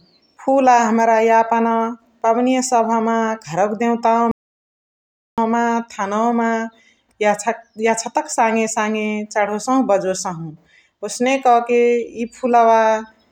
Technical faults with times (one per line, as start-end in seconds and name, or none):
4.31-5.38 audio dropout to silence